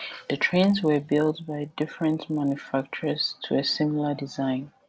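From the start to 3.26 s, the resampler restarted on every block. Each 20 ms block was converted on its own, apparently from 24 kHz down to 16 kHz, so every block edge carries a small discontinuity. The edges fall 50 times a second, so the speech picks up a rough 50 Hz buzz rather than separate ticks. Unlike mains hum at the same rate, this buzz rides only on the speech and vanishes in the pauses.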